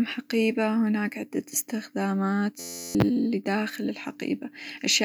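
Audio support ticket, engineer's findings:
System hang loop, 2.60–2.95 s: steady buzz at about 86 Hz, 11.6 ms segment repeating 30 times, fits a 512-sample ring buffer replaying during a driver stall; roughly 0.4 s of speech lost.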